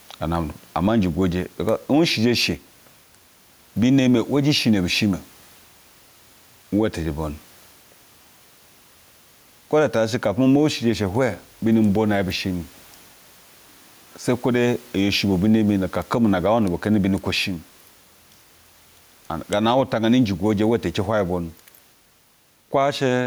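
Right through the speech there's gain pumping: the gain swings by something like 10 dB. The room noise itself sits about 38 dB below the speech. Loud and soft syllables come out squashed together. The likely cause is input gain set far too high, with a fast limiter or compressor clamping down on each loud sound.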